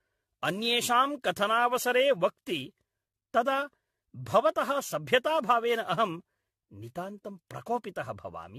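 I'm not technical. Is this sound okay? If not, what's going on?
No. Throughout the whole clip the speech sounds swirly and hollow, as if heard through a thin metal tube, and the starts of sounds are soft and smeared rather than crisp. The very top of the sound is gone, with nothing above 14.2 kHz. This is generation loss, most likely from the recording being compressed with the same lossy format again and again, around ten times, each pass adding its own small damage on top of the last.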